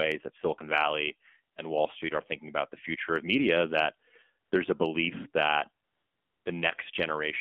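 The speech has passed through the AMR narrowband mobile codec for the entire clip. The sound was reduced to telephone bandwidth, roughly 250 Hz to 3.5 kHz, and rebuilt from a vocal-tract model driven by sparse pulses at a low rate, which fits AMR-NB at about 7.4 kbps. The result is plainly audible damage: a thin, muffled voice with nothing above 3.5 kHz and a buzzy, synthetic edge throughout.

On three occasions the phone treated the talker as silent, stopped sending speech frames, and the receiver filled the gap with AMR comfort noise. The first is a single 20 ms frame at 1.54 s. The second runs for 60 ms, from 4.46 to 4.52 s, between "future of media that" and "a belief that". The third lasts 620 ms, from 5.84 to 6.46 s, just after "a belief that". In each case the real background is swapped for a steady, smooth hiss that switches in and out.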